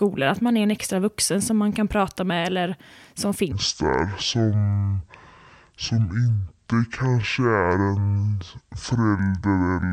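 From 3.52 s to 9.93 s there is a section at the wrong speed, likely because a player or editor clocked this stretch at just over half its proper rate. Right after "prata med eller som", the speech drops to 0.541 times its original speed, and pitch falls with it by roughly ten semitones. The voice turns deep and drawn out, and stays that way until "eller så".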